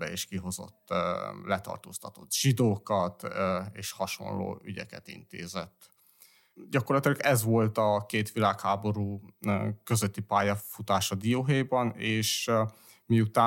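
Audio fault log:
Nothing to log here, since this bit of speech has no faults anywhere in it.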